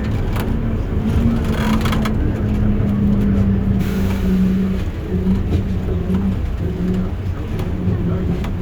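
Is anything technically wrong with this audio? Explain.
No, nothing is technically wrong with this audio.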